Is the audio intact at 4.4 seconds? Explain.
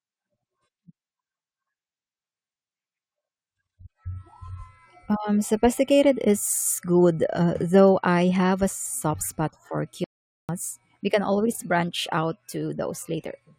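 Yes, at 4.4 seconds the speech plays through intact, with no dropout, glitch or other fault at that moment.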